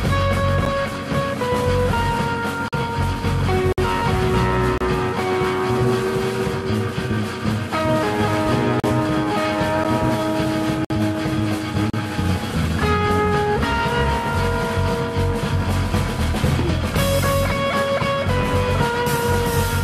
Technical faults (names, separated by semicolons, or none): gap between stream segments